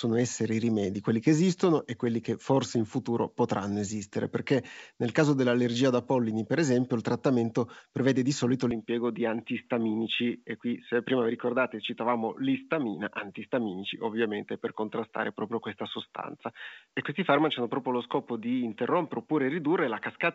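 At 8.71 s, after "trattamento prevede di solito", the speech turns dull and about 5 dB quieter, with nothing above 3.8 kHz. The input was likely switched to a poorer device.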